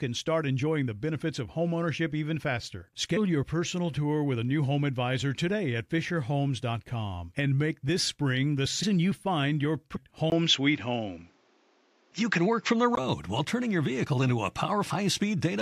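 At 3.16 s, between "of homeownership even faster" and "your personal tour with", compressed frames are skipped. The speech jumps forward by roughly 150 ms, which fits about seven 24 ms frames lost or rejected by the decoder. The same skip recurs at 8.82 s, and at 9.95 s just after "you find your", where roughly 200 ms goes missing.

From 10.3 s to 12.97 s the input has likely switched to a poorer device. A 20 ms gap opens the change. The sound then turns duller, with nothing above 7.6 kHz, the level shifts by roughly 5 dB, and a new noise floor appears, around 40 dB below the speech. The fuller sound returns before "while turning your".

A final frame skip of roughly 150 ms occurs at 14.89 s.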